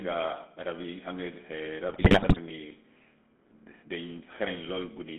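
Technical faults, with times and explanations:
Throughout: GSM full-rate codec. Speech is band-limited to roughly 200 Hz–3.5 kHz, with pulse-excited vocal-tract modelling giving a plainly audible buzzy, gravelly roughness, consistent with 13 kbps coding.
1.88–2.39 s: GSM bit errors. Corrupted filter, pitch and gain parameters distort successive frames, so the speech breaks into squawks, pops and gargling before recovering.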